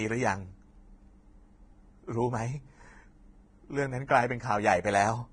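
From start to end, the speech has nothing above 9.7 kHz. The treble is hissy and grainy. Tones sound rough, and attacks are blurred. The likely cause is heavy Vorbis compression at a low bitrate, near 24 kbps. Fine treble detail became coarse noise.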